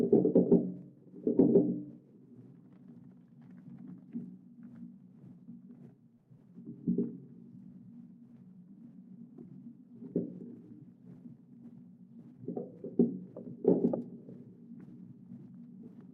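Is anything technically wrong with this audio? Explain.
No, nothing technically wrong turns up anywhere in this recording of sounds.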